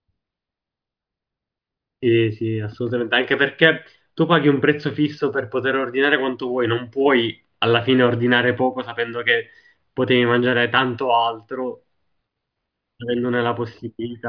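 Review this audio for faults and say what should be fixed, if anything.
Nothing to fix on this recording; I listened through and didn't hear any technical fault anywhere in the speech.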